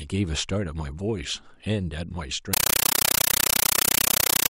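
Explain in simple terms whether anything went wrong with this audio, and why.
From 2.54 s onward, loud chattering static replaces the speech: a compressed stream played as audio, undecoded Dolby Digital data bursting 31 times a second.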